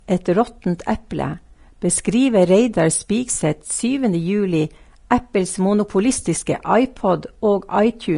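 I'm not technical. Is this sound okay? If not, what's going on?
No. Vorbis compression, throughout the clip, likely explains the hissy, grainy quality of the speech. Saving the file this small, the encoder discarded everything above about 10.6 kHz and roughly approximated the remaining treble, so fine detail turns into rough noise.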